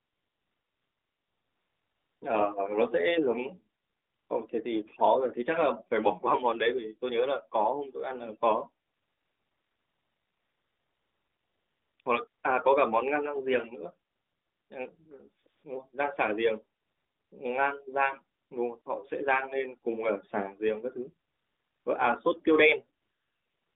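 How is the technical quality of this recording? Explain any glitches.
The recording has one recurring glitch: the background in the pauses is replaced by a smooth, steady hiss that switches in and out. The narrowband phone line, about 300 Hz to 3.6 kHz and consistent with a 12.2 kbps AMR-NB call, can be heard throughout with light coding damage.

AMR comfort noise: There are thirteen gaps between 0.0 and 23.76 s, lasting from 20 ms to about 3.1 s. The longest runs from 8.86 to 12.0 s, another opens the clip from 0 to 2.2 s, and the last runs from 23.0 s to the end. The phone judged these stretches silent and stopped sending speech, so the receiver filled them with synthetic noise.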